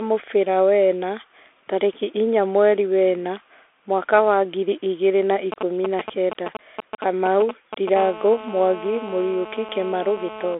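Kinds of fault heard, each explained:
Bluetooth CVSD headset codec: the speech passes through a one-bit adaptive delta modulator, so the band is confined to roughly 250 Hz to 3.5 kHz with nothing above 3.8 kHz. Sibilants turn scratchy, loud peaks distort as the step size lags, and granular hiss sits underneath throughout.
GSM signalling bursts: a nearby 2G handset transmitting short groups of radio bursts at 216.7 Hz gets rectified in the audio circuit. From 5.52 to 7.98 s this produces a galloping pattern of ticks and brief buzzes, a few decibels below the speech.
GSM phone buzz: once the handset settles into a call at 7.98 s, its continuous 216.7 Hz burst train is rectified into a steady, raspy, harmonic-rich buzz. It runs until 10.55 s at about 14 dB below the speech and bears no relation to it.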